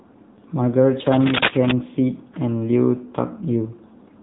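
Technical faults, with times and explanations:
Throughout: AMR narrowband mobile codec. Nothing above 3.8 kHz survives, so the speech sounds thin and phone-like. Each 20 ms frame is rebuilt from a vocal-tract model and a few pulses. The buzzy, synthetic edge is plain, which fits a low rate near 8 kbps.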